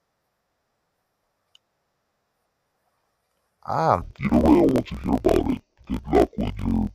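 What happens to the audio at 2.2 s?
Nothing goes wrong at 2.2 s; the speech carries on cleanly through that moment with no audible fault.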